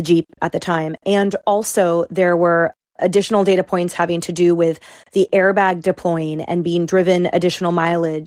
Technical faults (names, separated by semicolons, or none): none